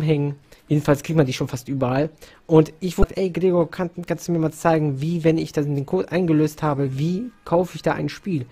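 Damaged data in a compressed stream hits the audio at 3.01 to 3.04 s: corrupted bytes leave the decoder unable to read those frames, so it loses sync and hunts for the next valid frame header, producing a brief glitch lasting about 34 ms.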